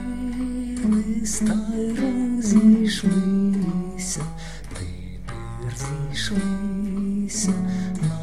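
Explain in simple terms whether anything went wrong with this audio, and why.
Nothing went wrong here; no faults can be heard.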